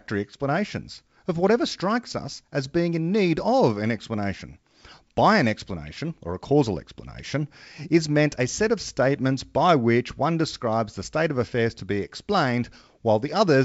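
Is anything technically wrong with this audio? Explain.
No, the speech comes through G.722 wideband coding at 64 kbit/s, clear up to about 7 kHz with at most a faint hiss in the upper band, and nothing technical stands out as wrong.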